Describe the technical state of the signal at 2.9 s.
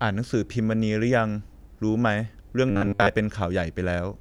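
At 2.9 s the speech has become a rigid, metallic buzz pinned at 100 Hz that only roughly tracks the words, the robotic sound from repeated short buffers, lasting from 2.71 to 3.10 s. It is likely caused by late-arriving audio being padded with repeats of the last 10 ms or so, replacing around 70 percent of the real signal.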